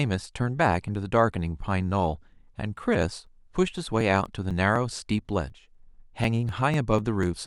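Periodic USB or driver dropouts run from 2.28 to 7.23 s: every 0.248 s a few milliseconds are skipped, producing regular ticks through the speech, roughly twenty in all.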